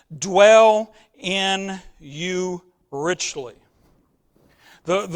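Speech, with nothing technically wrong at any point in the clip.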